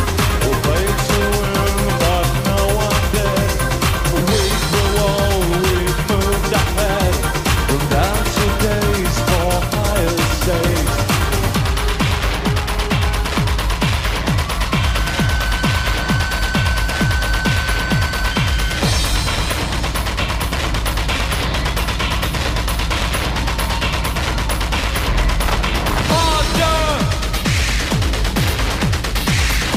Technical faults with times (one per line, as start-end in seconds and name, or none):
none